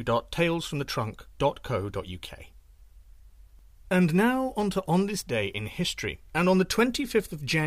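No technical faults can be heard anywhere in this recording.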